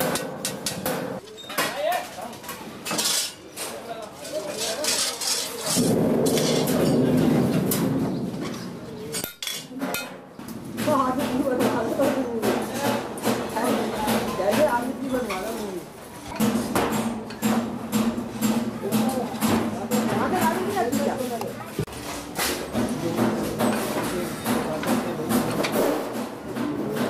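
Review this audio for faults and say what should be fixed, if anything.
Nothing stood out on listening, so there is nothing here that needs fixing.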